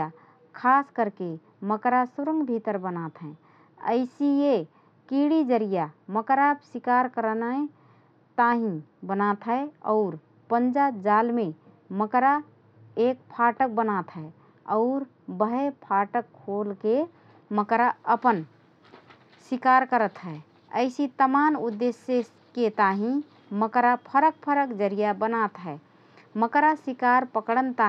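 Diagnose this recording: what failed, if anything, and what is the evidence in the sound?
De-emphasis was applied wrongly at the playback stage. From 0.0 to 17.54 s the speech sounds dull and muffled. The treble falls away smoothly, about 14 dB down at 10 kHz relative to 1 kHz. A treble-cut filter acted on audio that carried no matching pre-emphasis.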